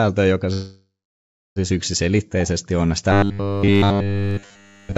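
From 0.53 to 1.59 s there is a call audio freeze. The last sound fades into silence, likely from delayed packets. Speech then resumes intact, about 1.03 s late.

From 3.12 s to the end there is robotic sound from repeated short buffers. A rigid 100 Hz buzz covers nearly everything, likely from 10 ms of audio looping repeatedly.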